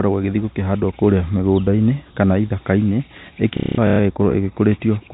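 From 3.57 to 3.99 s, packet loss with last packet repeated fills 330 ms with looped audio. It sounds like a robotic stutter, with repeated waveform blocks.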